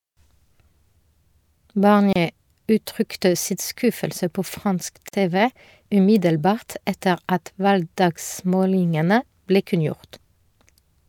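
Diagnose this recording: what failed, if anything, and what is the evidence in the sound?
The failure is at the codec stage: two gaps at a join of encoded pieces interrupt the speech, about 28 ms at 2.13 s and 48 ms at 5.09 s. Each piece kept its encoder start-up delay and padded final frame. Waveform and spectrogram show blank vertical strips, edges smeared, speech resuming where it stopped.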